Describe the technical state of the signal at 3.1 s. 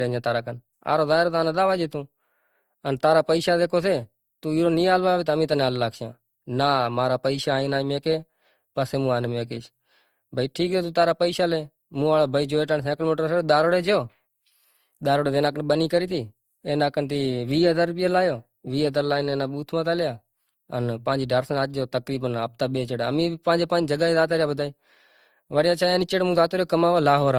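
At 3.1 s the speech carries generation loss, present across the whole clip: a swirly, hollow smear with blurred consonant attacks, likely from about four successive Opus passes at 48 kbit/s, each re-quantising on a shifted frame grid. The damage exceeds what that bitrate alone would cause, and content still reaches 20.2 kHz, so this is not simple band-limiting.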